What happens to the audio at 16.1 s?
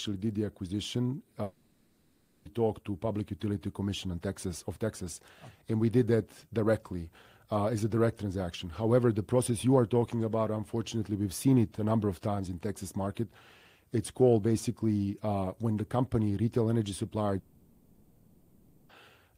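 Nothing goes wrong at 16.1 s; the speech there is intact and carries on without any dropout, click or distortion.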